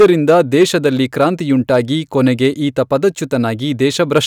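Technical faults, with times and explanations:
0.00–0.86 s, 1.74–1.76 s, 3.85–4.18 s: hard clipping. Peaks overdriven by about 8, 2 and 3 dB are cut flat, giving harsh fuzz, then brief crackle. The waveform shows squared tops, and the spectrogram shows high-frequency harmonic smear.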